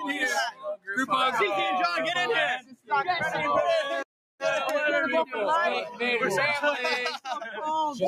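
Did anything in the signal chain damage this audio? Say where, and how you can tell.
Yes. Call processing is the culprit: a speech-oriented noise suppressor was left active on non-speech audio. Sustained material and decays sink and recover as the gain moves, a level swing of roughly 5 dB across the whole clip, so the sound pumps and thins while attacks mostly pass.

The same noise suppressor also cut specific sounds hard, from 0.5 to 0.88 s and from 2.6 to 2.91 s, with the deepest drops about 21 dB and about 20 dB. It classified those sounds as noise and pulled them well below the surrounding level.

A playback stall opens a dead gap from 4.03 to 4.40 s, about 370 ms of silence in mid-flow before the sound resumes. That is the playback stage, likely a starved output buffer or a blocked audio thread that stopped delivering samples until it recovered.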